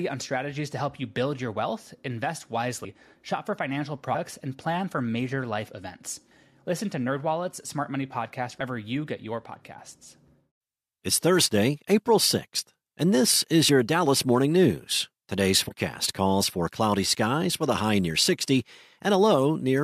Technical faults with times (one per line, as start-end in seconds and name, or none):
2.83-2.86 compressed frames skipped
8.59 compressed frames skipped
13.68 compressed frames skipped
15.68-15.72 compressed frames skipped